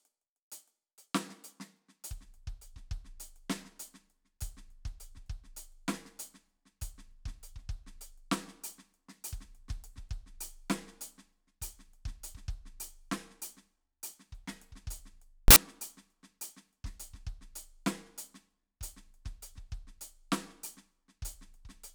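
At 15.48 s the music is replaced for 80 ms, until 15.56 s, by a burst of loud broadband noise: samples built from the wrong bytes. For that stretch the reader assembled each sample from mismatched bytes, whether shifted by one, swapped in order or misaligned, so the rapidly fluctuating low-order bits landed in the most significant position. The result is a harsh hiss that bears no relation to the music around it, then cuts back cleanly.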